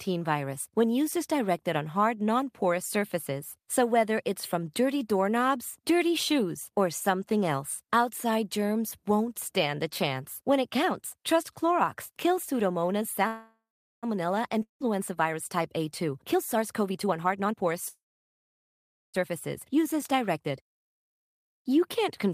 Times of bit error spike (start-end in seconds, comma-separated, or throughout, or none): none